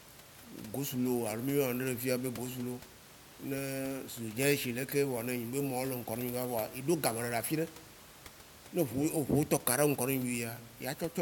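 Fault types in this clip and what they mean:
Nothing has gone wrong in this recording; the faint room noise sitting about 20 dB under the speech is just the space the microphone was in.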